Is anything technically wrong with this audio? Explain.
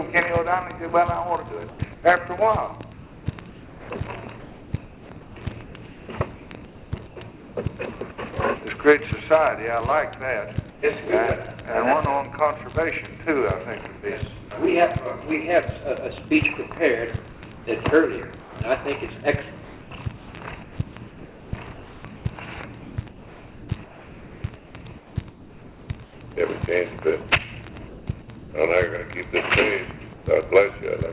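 Yes. In the pauses at 1.7–8.18 s, 10.7–10.82 s, 27.89–28.52 s and 30.14–30.26 s, the real background turns into steady, featureless hiss, about 5 dB and 4 dB quieter in the two short gaps. This is comfort noise in place of the background, likely from discontinuous transmission.

At 8.12–8.18 s a brief bit of sound gives way to that same hiss. This is sound dropped by the voice detector, which likely mistook it for background.

From 17.33 to 26.21 s the sound turns choppy, with quiet edges repeatedly swapped for synthetic noise. This is sound chopped by the voice detector, likely as it toggled sending on and off.

Across the whole clip nothing is heard above 4 kHz, which fits a narrowband call codec.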